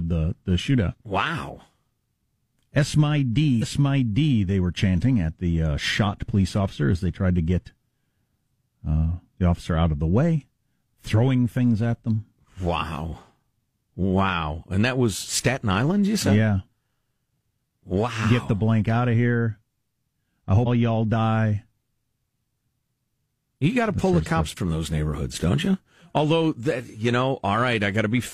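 At 3.58, 20.62 and 24.52 s, compressed frames are skipped: the speech jumps ahead by roughly 200, 150 and 300 ms, each a loss of whole 46.4 ms frames.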